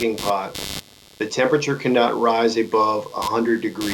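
Computer activity noise runs throughout this speech recording: a buzzy pulsing near 100 Hz, roughly 15 dB below the voice, as computer load changes disturb the audio circuit's shared ground.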